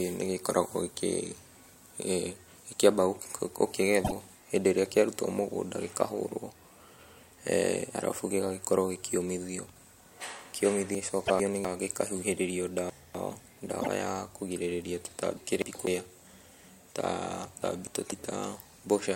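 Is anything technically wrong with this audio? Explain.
Yes, this speech clip has two kinds of technical fault.

At 4.04 to 4.12 s, 11.25 to 11.30 s and 13.81 to 13.88 s there are brief chirps, noisy bursts or small holes, each lasting only a few tens of milliseconds. The likely cause is a broken MP3 bit reservoir. After frames of roughly 26 ms were lost, the following frame reached back for data it had stored earlier and decoded bytes belonging to a different frame. The sound skips forward with a garbled instant.

At 10.95 to 11.65 s, 12.90 to 13.40 s, 15.37 to 15.87 s and 17.62 to 18.12 s the speech briefly jumbles. These are chunks out of order. A quarter-second piece of audio played after pieces meant to follow it. It was one chunk late in the last three cases and two chunks late in the first. Nothing is missing, but the sequence is scrambled and each seam is a hard cut.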